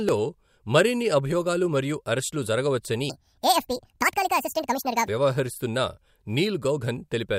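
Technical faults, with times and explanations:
3.10 to 5.08 s, section at the wrong speed: Just after "అభియోగాలు మరియు అరెస్టులు జరగవచ్చని", the speech jumps to 1.7 times its normal speed for about two seconds. The voice turns rushed and shrill, raised by roughly ten semitones, then snaps back to normal at 5.08 s. Speed and pitch shift together because the samples are played out faster than they were recorded. The likely cause is this stretch being read against the wrong clock.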